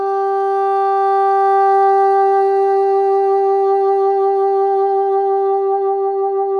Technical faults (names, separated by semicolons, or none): none